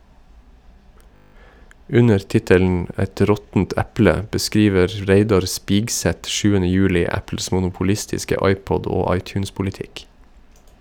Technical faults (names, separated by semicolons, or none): system hang loop